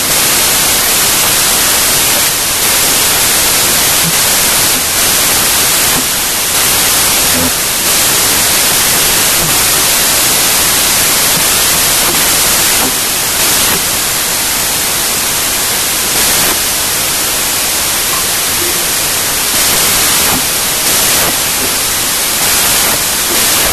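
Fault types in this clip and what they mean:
wrong sample width: the speech was stored as packed 24-bit samples but read back as 32-bit ones, so most values combine mismatched bytes. Throughout, loud noise buries the speech, which plays 1.33 times too fast and correspondingly higher in pitch.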